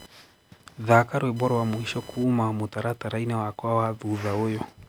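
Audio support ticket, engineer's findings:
Computer activity noise throughout speech: buzzing chirp pulsing around 1 kHz, roughly 25 dB under the speech, audible in pauses. CPU, GPU or mouse load shifting the shared audio ground. Spectrogram: faint line near 1 kHz plus harmonics, independent of speech.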